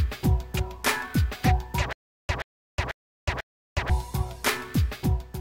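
From 1.93 s to 3.90 s a short fragment of about 129 ms plays, cuts to dead digital silence for roughly 363 ms, then returns identical, cycling every 492 ms and repeating four times, a stutter with silent gaps. The steady, mechanical rhythm and the total silence between bursts likely come from a stalled player or stream that replayed its last buffered fragment at each retry and then ran empty, so the intervening audio is simply lost.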